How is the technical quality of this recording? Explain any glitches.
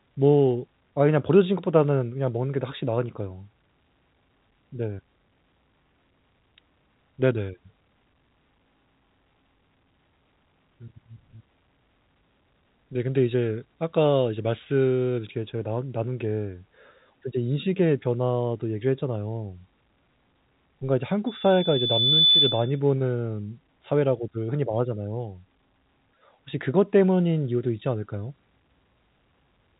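One clear fault stands out: a burst of loudspeaker feedback squeal near the end of the speech. The whole recording has telephone-band audio that cuts off near 3.8 kHz, consistent with G.711 coding.

From 21.27 s to 22.80 s a loudspeaker feedback squeal appears. The microphone is picking up its own loudspeaker, and at 3.5 kHz the loop gain exceeds unity. A pure tone swells over roughly a second until it sits a few decibels above the speech, then stops.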